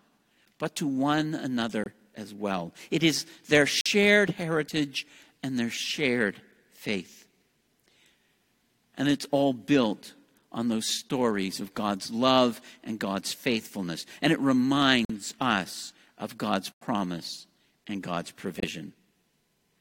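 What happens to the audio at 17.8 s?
Nothing goes wrong at 17.8 s; the speech carries on intact through that moment.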